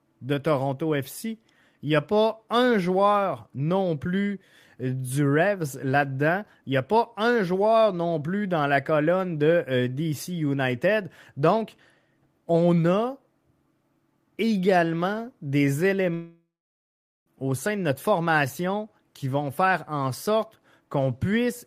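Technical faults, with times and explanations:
16.14 to 17.28 s, long network dropout: the speech breaks off into a fading buzz, then about 0.81 s of silence, and resumes with some 1.12 s missing. Likely packets stopped arriving, so the receiver stretched the last sound before giving up.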